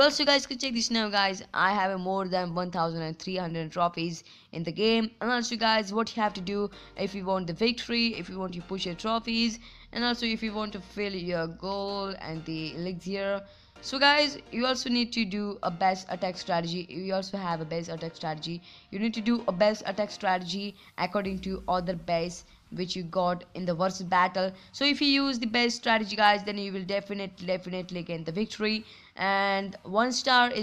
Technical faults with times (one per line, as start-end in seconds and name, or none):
none